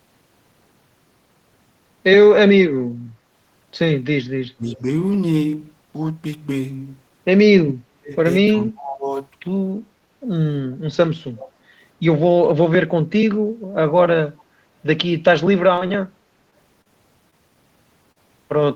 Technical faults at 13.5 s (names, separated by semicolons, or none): none